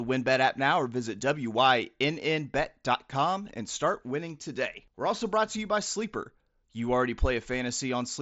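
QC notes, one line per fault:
No faults heard. The speech shows the Bluetooth mSBC headset codec at work, with nothing above about 7.7 kHz and a light codec graininess.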